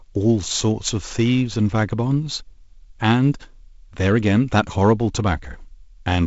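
A speech clip with nothing technically wrong with it.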